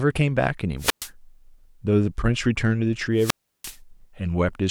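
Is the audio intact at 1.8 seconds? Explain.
Yes, the audio is intact at 1.8 seconds, with no dropout, click, distortion or other technical fault at that moment.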